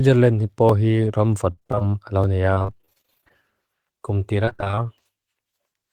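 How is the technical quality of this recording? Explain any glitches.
The recording has two kinds of glitch: regular clicks and three choppy, robotic stretches.

Clock drift buffer slips: four clicks recur every 1.56 s between 0.69 and 5.35 s. The likely cause is mismatched device clocks dropping or repeating roughly 70 samples. Unlike packet loss, each slip is a single isolated tick at a steady interval.

Repeated packet loss (robotic sound): from 1.51 to 1.82 s, 2.54 to 3.44 s, and 4.45 to 4.79 s, the speech turns choppy. Dense bursts of short gaps, up to 57 ms, are patched by stretching the preceding sound, so roughly half of each stretch is filled in rather than original.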